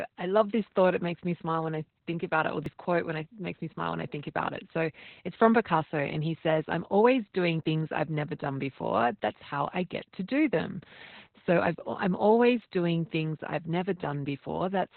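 Opus voice compression runs throughout the speech. Everything above about 4.3 kHz is gone, leaving the narrow, boxed-in band of a telephone line, and the voice sounds muffled, hoarse and slightly robotic. The codec has dropped to its narrowest band and codes the excitation coarsely. That sound points to the SILK coder at a very low rate, which fits roughly 8 kbps in 20 ms frames, and the damage is heavy.

Audio missing between chunks is heard at 2.66 s, between "think about it or" and "quote when it makes", again at 7.64 s, between "says I'm always doing" and "I've never done before", and at 12.62 s, between "I've I'm" and "doing things I've". Each is a brief skip where a sliver of sound, around 20 ms, vanishes and the two sides butt together. The skips repeat every 5 s, which likely comes from the processing chain losing audio as it closes one chunk and opens the next.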